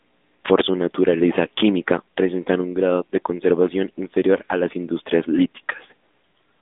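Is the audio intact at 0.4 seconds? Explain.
No. At 0.4 s, as throughout, the speech passes through the AMR narrowband mobile codec at 10.2 kbps, which models the vocal tract from sparse pulses within a band of about 200 Hz to 3.6 kHz. Nothing above 3.8 kHz survives, leaving a muffled, plainly audible buzzy, synthetic edge.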